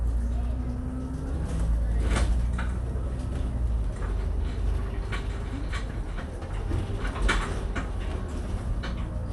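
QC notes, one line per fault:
Throughout, Dolby Digital compression: the audio sounds dull and band-limited, with nothing above about 11.4 kHz, and there's a rough, fluttery grain clinging around the tonal parts. That's likely an AC-3 style encode starved of bits, which fits something around 64 kbps. At that rate the encoder cuts the top of the band and leaves many frequency lines with no real detail, so the decoder fills them with noise, which is the shimmer you hear.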